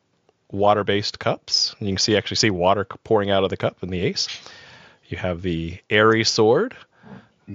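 Nothing goes wrong anywhere in this speech recording, and the faint room noise underneath sits about 50 dB below the talking, so it stays well in the background.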